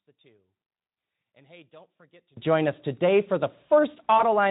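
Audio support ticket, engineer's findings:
One channel inverted, likely, 0.0 to 2.37 s: reversed polarity on one side cancels the shared content in mono, dropping speech about 30 dB to a faint residue until just before "join us today for".

VoIP packet loss concealed by the speech codec at 2.0 s and 4.17 to 4.24 s: the decoder extrapolates over a gap that fits one lost 20 ms frame, producing a short fading smear with weak speech afterwards, over light Speex coloration.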